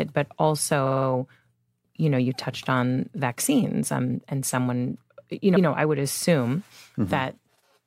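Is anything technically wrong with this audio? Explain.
Yes, there are two instances of repeated frames in this speech. A run of compressed frames was stored or sent more than once, so the decoder plays the same slice of audio again. From 0.85 to 1.06 s, a 52.2 ms block, which fits two frames, plays four extra times, giving a rapid stutter and adding 209 ms. At 5.55 to 5.66 s, a 104.5 ms block, which fits four frames, repeats once, a single skip-back that stretches the clip by 104.5 ms.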